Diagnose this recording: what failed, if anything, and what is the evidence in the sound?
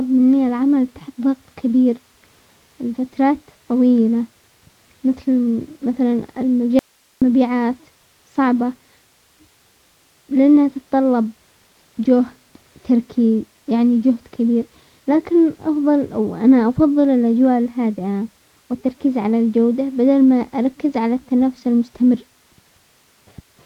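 An audio dropout to a faint residue occurs in the speech at 6.79 s, just after "مثل مثلا". The signal vanishes abruptly for about 0.43 s and returns at 7.22 s. The gap holds only hiss, roughly 40 dB below the speech level. The edges are sudden, not a fade or a natural pause. The input chain stayed powered and live while the wanted signal was cut. The likely stage is the analogue wiring, such as an intermittent connector or cable between source and input.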